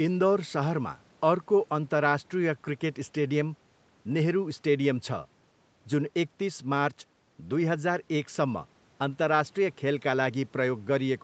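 No technical faults are audible.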